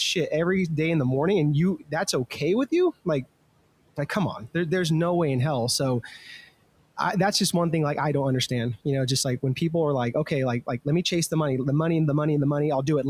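At 1.79 s the noise suppressor clamps down on the speech for about 0.15 s, until 1.93 s, pulling it down by about 18 dB at the deepest point. The suppressor mistook a soft stretch of speech for background noise and attenuated it along with the room sound, so that fragment comes out swallowed and faint. Unlike a dropout or packet loss, the audio never cuts to silence or glitches; it just ducks briefly and returns. The room noise, sitting about 23 dB below the speech, belongs to the recording itself.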